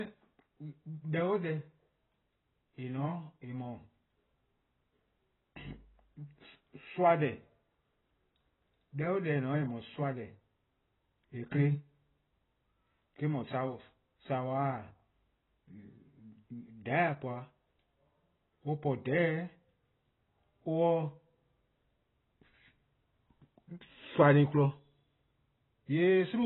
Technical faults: AAC compression

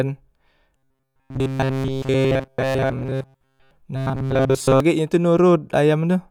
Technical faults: robotic sound from repeated short buffers

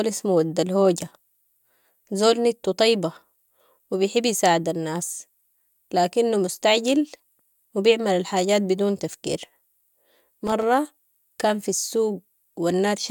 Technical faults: loose connector crackle

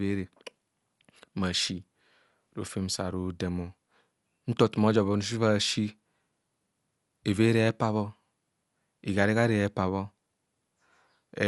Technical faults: Dolby Digital compression

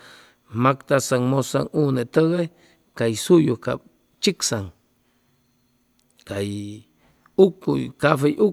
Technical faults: none

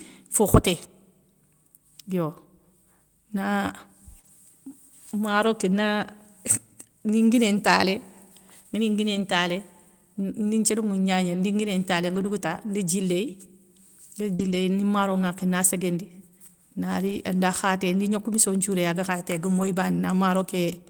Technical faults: short concealed packet loss; lost packet rebuilt from error correction

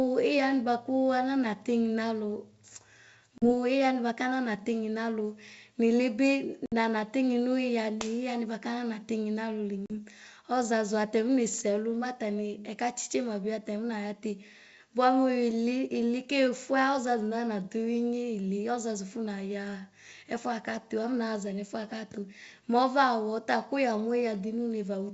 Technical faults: packet loss on an ADPCM call

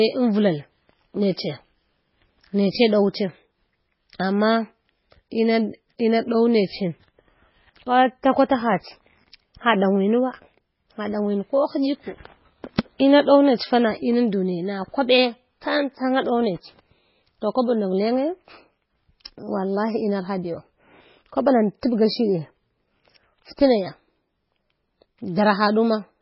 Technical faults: MP3 compression

